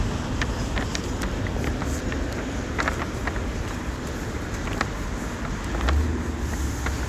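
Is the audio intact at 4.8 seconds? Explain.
Yes, at 4.8 s the sound plays through intact, with no dropout, click, distortion or other fault at that moment.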